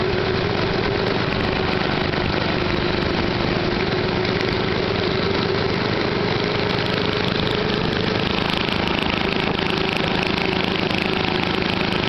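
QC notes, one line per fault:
Nothing stood out on listening.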